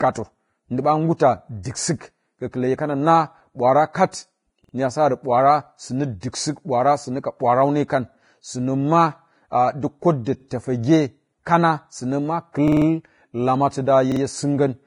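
The speech is dull and grainy from start to finish. Nothing is heard above 10.5 kHz. The upper treble is rough and hissy, and consonant attacks are smeared. This is likely Vorbis compression at a low bitrate, roughly 28 kbps. The residue above the floor is quantised so coarsely that detail turns to noise.

At 4.64 to 4.74 s there is a repeated buffer. A 46 ms slice plays three times in a row, with a hard join each time. More repeated buffers follow. At 10.40 to 10.45 s a slice plays twice. At 12.68 to 12.86 s one plays five times, giving a short stutter. At 14.12 to 14.21 s one plays three times. In each case new audio arrived late, so the last block was replayed. The 46 ms length fits a 2048-sample buffer, and little or no audio seems lost.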